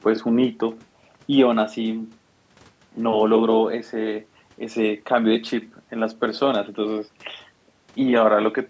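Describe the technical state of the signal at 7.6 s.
At 7.6 s the speech is intact, carried cleanly through the call's microphone processing with no fault present at that moment.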